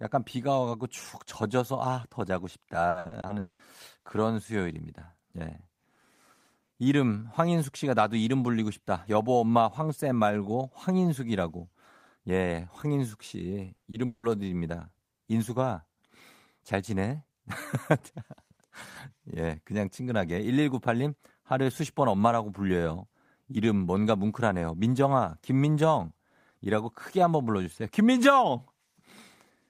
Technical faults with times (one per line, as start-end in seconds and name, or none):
2.89-3.61 repeated packet loss (robotic sound)
13.75-14.25 repeated packet loss (robotic sound)